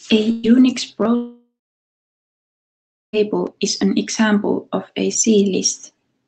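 A speech recording carried over an Opus call path, band-limited at about 8 kHz, with two network faults. Between 0.31 and 0.46 s a burst of packet loss drops about 120 ms of audio; the receiver conceals it by extending and fading the last sound, so a brief buzz or hiss replaces the missing speech before it resumes further on. From 1.15 to 3.16 s the audio stops arriving, likely a long network dropout: concealment stretches the last sound into a fading tail, then about 1.6 s of silence follows, and roughly 2 s of speech never returns.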